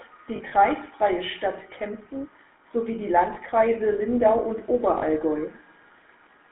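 Throughout, the speech carries the buzzy, gravelly roughness of the GSM full-rate codec, whose pulse-driven vocal-tract model plainly degrades the voice. The band runs only from 250 Hz to 3.6 kHz, and the sound fits a 13 kbps GSM full-rate stream.

From 0.36 to 0.54 s, lost GSM frames totalling 80 ms are scattered over about 160 ms, in short runs of a few tens of milliseconds. Each gap is filled by repeating the settings of the last good frame, leaving a rough metallic ring. Shorter lost GSM frames recur at 3.34 to 3.38 s (20 ms) and 4.98 to 5.04 s (40 ms), each a brief held metallic smear.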